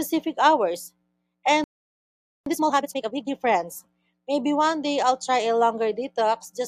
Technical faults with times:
1.64-2.46 playback stall
2.46-3.28 time-compressed catch-up

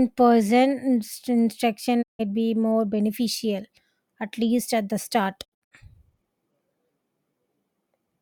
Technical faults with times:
2.01-2.21 digital broadcast dropout
5.43-5.73 digital broadcast dropout

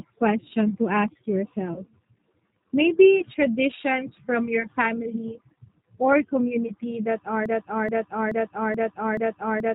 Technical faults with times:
0.00-9.74 G.729 codec
1.74-1.82 VoIP packet loss concealed by the speech codec
7.46-9.74 broken-record loop

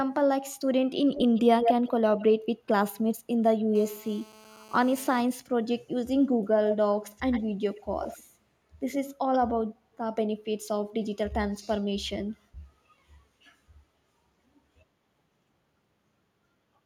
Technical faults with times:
1.13-1.91 echo leak
2.17-2.23 echo leak
3.75-5.21 GSM phone buzz
6.70-6.77 echo leak
7.17-7.43 echo leak
7.75-8.23 echo leak

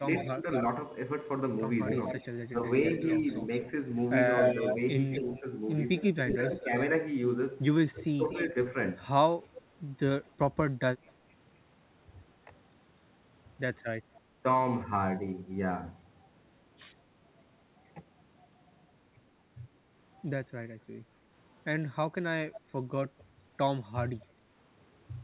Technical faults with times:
0.00-0.46 speech suppressed in double talk
0.15-11.10 echo leak
2.51-2.65 speech suppressed in double talk
5.23-8.55 speech suppressed in double talk
14.03-14.19 echo leak
22.53-23.23 echo leak

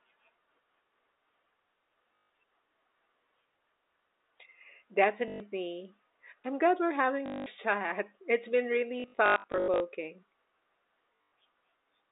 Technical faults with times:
2.16-2.30 packet loss with last packet repeated
5.28-5.40 packet loss with last packet repeated
7.26-7.46 packet loss with last packet repeated
9.00-9.80 packet loss with last packet repeated
11.16-11.32 packet loss with last packet repeated

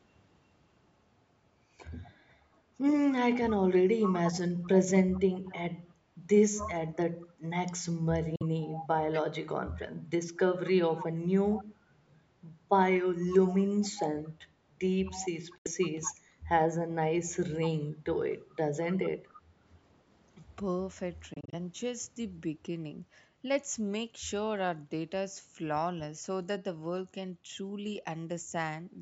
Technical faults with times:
4.05-5.57 echo leak
6.55-6.69 echo leak
8.36-8.42 Bluetooth dropout
8.59-9.21 echo leak
10.97-11.64 echo leak
15.07-16.15 echo leak
15.58-15.67 Bluetooth dropout
18.93-19.34 echo leak
21.34-21.55 Bluetooth dropout

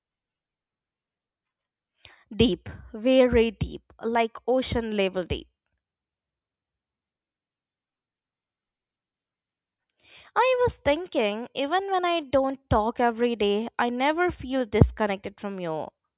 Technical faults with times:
none

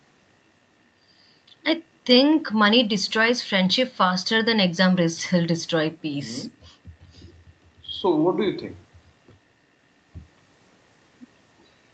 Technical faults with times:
none

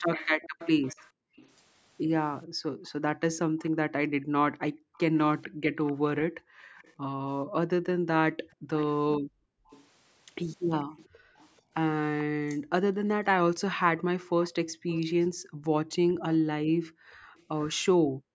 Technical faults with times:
0.12-12.23 echo leak
0.41-13.04 background gated by the echo canceller
13.99-17.81 echo leak
14.74-18.34 background gated by the echo canceller

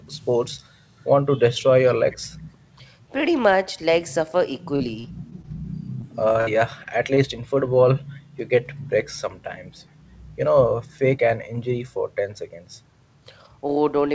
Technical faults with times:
0.27-0.31 echo leak
2.11-2.29 echo leak
4.76-5.45 repeated packet loss (robotic sound)
6.01-7.18 repeated packet loss (robotic sound)
7.10-7.75 jitter buffer slow-down
8.15-8.20 echo leak

